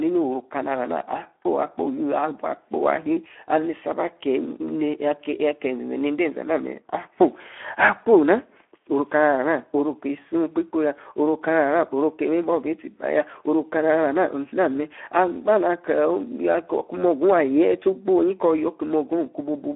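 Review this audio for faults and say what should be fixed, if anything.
The speech sounds hoarse and grainy for the whole clip, squeezed into a narrow 250 Hz to 3.4 kHz band. This is Speex codec damage: a low setting, consistent with about 11 kbps, leaves too few bits for the excitation signal, so voicing turns noisy. To prevent it, encode at a higher Speex quality or switch to a modern wideband codec such as Opus.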